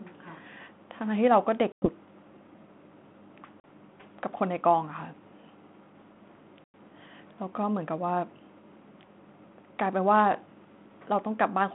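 Packet loss on an ADPCM call hits the speech three times: 1.72 to 1.89 s, 3.60 to 3.65 s, and 6.64 to 6.75 s. Each is a hard-edged silent hole, 100 ms, 40 ms and 100 ms long. The decoder's adaptive predictor and step size lose track of the sender during each gap. So the sound comes back with brief, slight distortion. It settles within tens of milliseconds. The narrowband G.726-style line around it stays telephone-limited.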